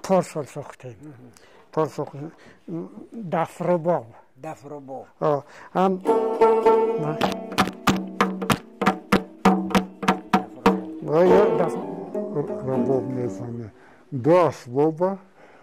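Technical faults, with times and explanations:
11.83–15.62 s: section at the wrong speed. Sound runs at 0.816 times speed, dragging and dropping about four semitones, likely from a mismatched playback clock.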